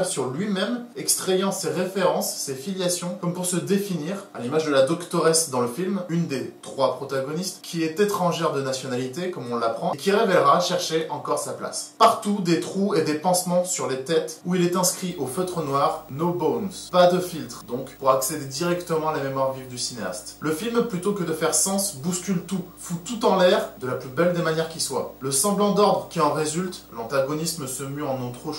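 From 15.1 s to the end of the clip a video or display buzz sits under the sound. A screen or video cable is coupling into the audio path. It is a 50 Hz field-rate buzz with hash above it, roughly 25 dB below the signal, plus a thin whine at 15.6 kHz. On a spectrogram this shows as a 50 Hz harmonic comb and a steady line near 15.6 kHz.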